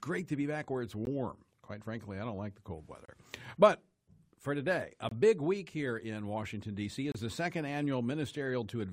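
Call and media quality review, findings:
Gap between stream segments: hard-edged silent holes at 1.05 s (about 17 ms), 3.05–3.08 s (30 ms), 5.09–5.12 s (25 ms) and 7.12–7.15 s (28 ms). The roughly 2 s spacing points to segment boundaries in the streaming player. Segment timestamps leave a small gap, which the player pads with silence. Unlike a packet-loss dropout, no audio is missing: sound resumes exactly where it stopped, and the clip just gets longer.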